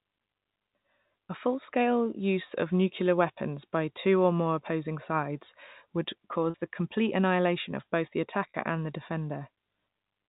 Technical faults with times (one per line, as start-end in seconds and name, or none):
6.50-6.54 packet loss with pitch repetition
8.50-8.54 packet loss with pitch repetition